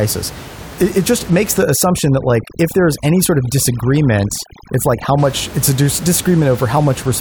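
From 1.62 s to 5.18 s, just after "it just makes" and running up to "it's a", overdone noise removal sets in. A denoiser pushed too hard is cutting individual frequency bands whenever they sit near its noise estimate, so the room noise, which elsewhere rests about 16 dB under the speech, collapses toward silence with twinkling specks. The quieter parts of the voice are carved away too. A low-bitrate codec would smear detail more evenly, and it would not gate the background this way.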